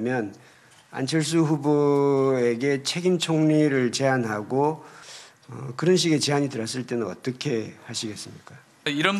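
No technical faults can be heard anywhere in the clip. There is nothing to report in time order.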